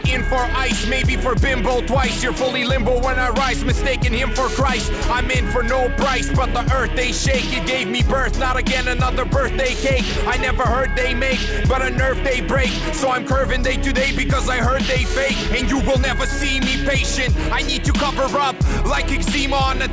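No faults are audible; the sound carries the band limit of a wideband call path with nothing above 8 kHz, which fits G.722 at 64 kbps.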